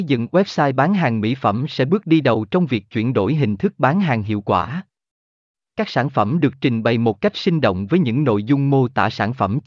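No technical faults can be heard anywhere in the recording, which stays steady and intact throughout.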